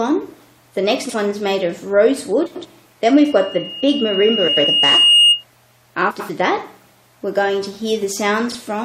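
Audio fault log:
1.04–1.14 s, 2.46–2.66 s, 4.47–4.67 s, 6.10–6.30 s, 8.50–8.55 s: frames out of order. In each stretch, two adjacent blocks of coded frames were decoded in swapped order. The blocks are 46.4 ms, 92.9 ms, 92.9 ms, 92.9 ms and 23.2 ms long, which fits frames of about 23 ms. Each stretch plays with its halves exchanged, giving a brief garbled flutter. No time is lost.
3.15–5.44 s: loudspeaker feedback squeal. A microphone is picking up its own loudspeaker, and at 2.8 kHz the loop gain exceeds one, so that frequency feeds on itself. It grows over roughly two seconds into a piercing single-tone whistle. The whistle ends up about 10 dB above the rest of the sound and persists until 5.44 s.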